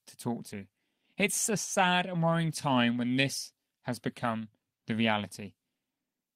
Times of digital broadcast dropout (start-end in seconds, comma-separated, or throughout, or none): none